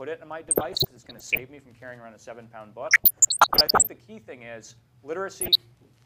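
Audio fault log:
0.41–1.40 s, 2.86–3.87 s and 5.41–5.62 s: DAB burbling. Three bursts of burbling sit over the audio. Weak reception lets bit errors slip past error correction into the MP2 data. Corrupted samples put short blips of noise in single sub-bands, and corrupted scale factors make sub-bands jump in level for up to a frame. The first two bursts each fit around forty damaged frames. The short last one fits only a handful. The middle burst is the densest, with errors near one percent.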